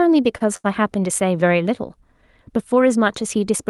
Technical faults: short stall from a late packet

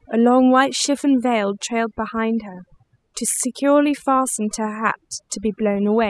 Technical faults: overdone noise removal

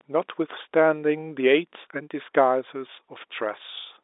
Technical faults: none

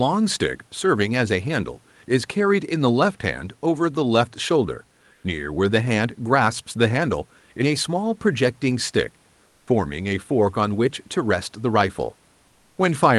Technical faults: comfort noise in place of the background; onset clipped by the voice detector

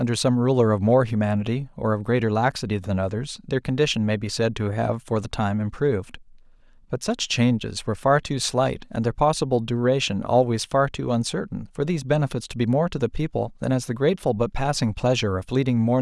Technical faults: none

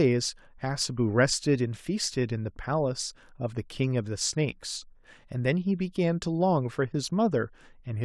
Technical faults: none

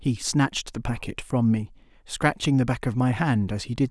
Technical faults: none

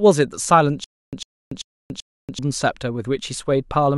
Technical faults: stutter with silent gaps

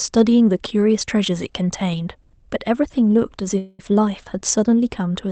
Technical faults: call audio freeze

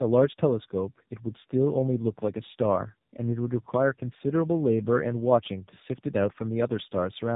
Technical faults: tandem speech coding

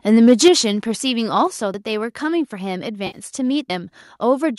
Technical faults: microphone overload; microphone volume stepped down; audio missing between chunks; AAC frame loss with concealment

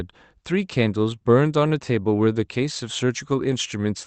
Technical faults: none

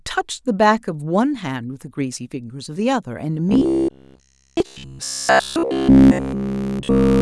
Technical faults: robotic sound from repeated short buffers

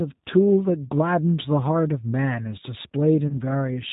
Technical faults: G.729 codec; VoIP packet loss concealed by the speech codec

